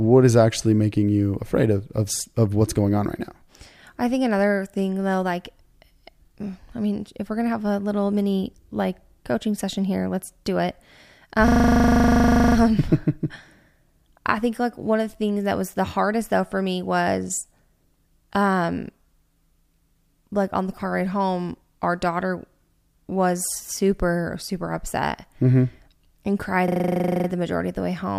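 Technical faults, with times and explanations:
11.48–12.56 s and 26.68–27.28 s, system hang loop: the playback side froze and the hardware kept replaying the same 40 ms slice of its buffer, so the sound turns into a rough 25 Hz buzz. Afterwards the audio resumes without any obvious gap.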